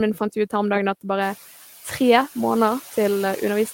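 Noise suppressor artifacts throughout: the suppressor cuts bands it takes for steady noise by about 5 dB frame by frame, so the room noise sinks between the words and rises under them.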